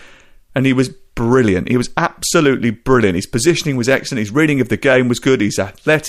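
No technical faults are audible anywhere in this recording.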